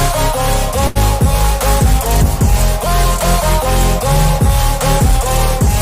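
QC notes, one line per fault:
0.87–0.97 s, short stall from a late packet: a sound is held for about 80 ms with a faint buzzy dip, then carries on from exactly where it stopped, with nothing skipped. A packet arrived late, the jitter buffer ran dry, and the receiver stretched the last audio to fill the gap, adding about 80 ms of delay from then on.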